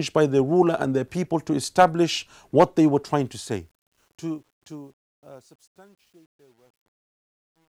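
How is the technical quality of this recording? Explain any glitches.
The recording has one clear problem, in its fade-out. From 3.1 s, just after "establish what they were", there's truncation distortion on a fade. The gain stage keeps too few bits and adds no dither, which fits roughly 10-bit resolution. From 4.61 s to the end at 7.75 s the tail turns gritty.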